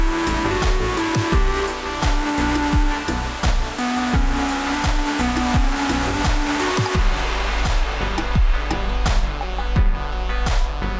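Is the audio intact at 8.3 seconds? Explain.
No. At 8.3 seconds, as everywhere else in the clip, you're hearing a wrong sample rate problem. The samples are clocked out slower than they were captured, with no resampling, so everything runs at about two-thirds speed (0.667×) and drops about 7 semitones in pitch together. That gives a low, dragging, sluggish sound, and the ratio fits audio recorded at 24 kHz being played back at 16 kHz.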